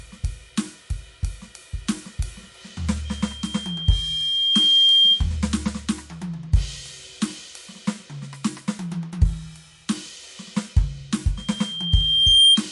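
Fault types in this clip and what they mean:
MP3 compression: The music has a watery, swirling quality, with attacks smeared, likely from low-bitrate MP3 encoding near 48 kbps, where weak frequency lines drop in and out between frames as bits run short.
Loudspeaker feedback squeal: A single 3.2 kHz tone swells from 3.05 to 5.26 s and again from 11.37 to 12.61 s, building over roughly a second or more to sit about 10 to 15 dB above the music, as the loudspeaker-to-microphone loop runs away.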